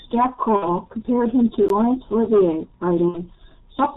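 The whole clip passes through the G.723.1 codec, and the damage is heavy. The speech is muffled, with nothing above 4 kHz. Voices sound hoarse. Consonants smear together. The slow-moving voice model, updated only every 30 ms, cannot follow fast changes in the sound. The codec runs in its 6.3 kbit/s mode.

At 0.56 s comes the first VoIP packet loss concealed by the speech codec. It lasts until about 0.69 s. The decoder had no new data, so it kept replaying its last pitch and filter settings while turning the level down. The speech is stretched into a buzzy tone or coloured noise that fades. The 60 ms of missing audio fits two lost frames. Recovery is not instant. Each frame depends on the one before, so the voice stays weak and rough for a short time after data returns.

At 1.69 s there is a block of digital silence, 16 ms long. The signal drops straight to silence and comes back with no fade, so it comes across as a short hole. 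A gap like this likely comes from output samples not being delivered in time.

At 3.08 s the packet loss concealment happens again and runs to about 3.21 s. It is the same fault as before. Again, 60 ms is missing, which fits two frames. The speech is stretched into a buzzy tone or coloured noise that fades, then stays weak and distorted briefly before it recovers.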